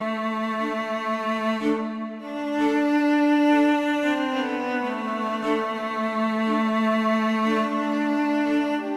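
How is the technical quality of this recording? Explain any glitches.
No glitches or faults heard.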